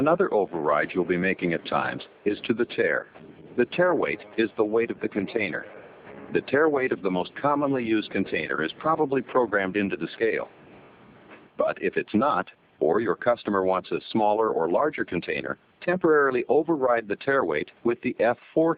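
Nothing stood out as a technical problem on listening to this audio.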